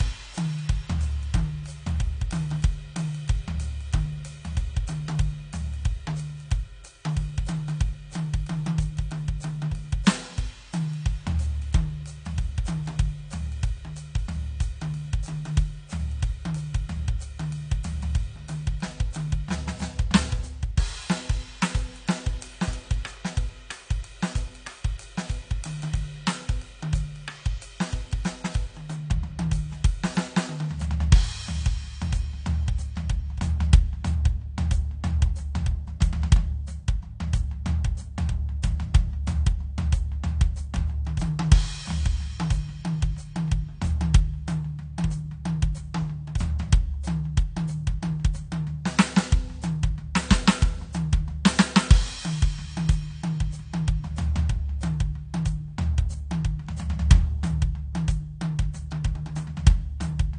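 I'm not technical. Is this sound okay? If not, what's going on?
No. Throughout the music, the top end is missing, with nothing above 9.7 kHz, so it sounds dull and muffled, and held sounds have a watery, warbling texture. That is most likely AAC compression squeezing the file hard. Unlike a plain muffled recording, this has that shimmering, underwater grain.

At 58.91 s there is pre-echo: a tiny hiss, about 11 ms long, arrives just before a sharp hit, which makes the attack soft and smeared. A real echo would come after the sound, but this noise comes before it.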